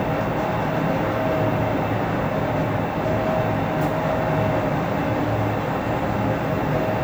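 Nothing stood out on listening to this recording of sounds.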